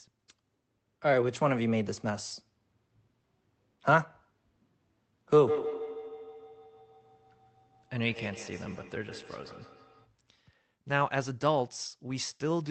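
Speech recording with feedback echo between two devices from 5.4 to 10.12 s. Each phrase returns roughly every 150 ms, peaking at about -11 dB relative to the speech, because a second device plays the far audio into a microphone whose echo canceller cannot remove it.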